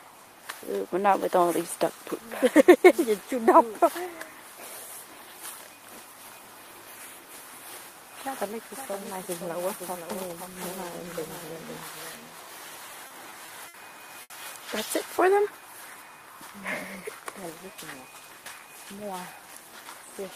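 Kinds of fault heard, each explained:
Doubled audio track: From about 6.34 s to 15.02 s, a second full-band copy of the sound runs roughly half a second behind, around 5 dB quieter, with no room colour. It starts and stops abruptly, likely a second capture path or a misaligned edit layered in.
Repeated stalls (stutter): Between 12.91 s and 13.76 s, the playback keeps running dry and the last bit of sound gets stretched to cover it, five times, about 140 ms in total, the longest about 60 ms. Nothing's lost, but it drags and stutters.
Short stall from a late packet: At 14.22 s to 14.32 s, one piece of the stream showed up late, so the receiver held the previous sound for about 80 ms before carrying on from the same spot. You hear a brief smeared hold, with nothing actually missing.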